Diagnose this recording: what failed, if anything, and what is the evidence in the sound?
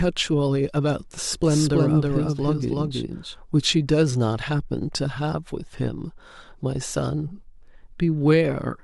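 Doubled audio track from 1.33 to 3.39 s: an equally loud dry copy trails about a third of a second behind, likely a duplicated capture path.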